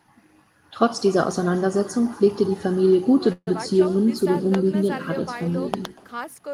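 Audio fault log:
Throughout, echo with no canceller: a faint, thin copy of the speech trails it by roughly a fifth of a second, about 22 dB down, so the far end's speaker is leaking back in.
3.32–3.48 s, call audio freeze: sound stretches into a fading buzz or hiss, then about 40 ms of silence, then resumes where it stopped, likely a starved jitter buffer after delayed packets.
4.55 s, loud pop: a single sharp pop, roughly 15 dB above the speech, with the audio carrying on underneath.
5.74–5.87 s, loud pop: a pair of pops in quick succession, roughly 10 dB over the speech, likely from a plug, switch or driver glitch.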